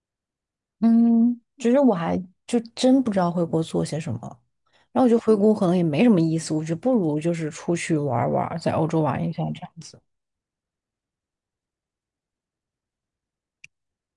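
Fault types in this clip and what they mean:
Nothing here to flag, since the speech comes across without any audible technical trouble anywhere along the way.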